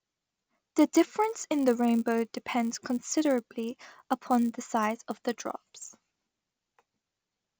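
Throughout the speech runs a 100 Hz buzz from a resampler restarted on every block: each 10 ms block was converted from 16 kHz to 48 kHz without its neighbours, leaving an error at every edge. Unlike mains hum, it vanishes in pauses.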